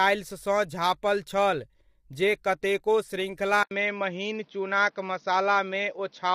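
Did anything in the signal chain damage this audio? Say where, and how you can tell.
Yes. At the codec stage, the speech is rough and grainy throughout, with noise between harmonics. This is likely low-delay AAC compression, consistent with AAC-ELD near 32 kbps.

At the capture stage, an 80 ms silence falls at 3.63 s. After it, nothing passes above 6 kHz, and faint new noise appears. The input likely switched to a poorer device.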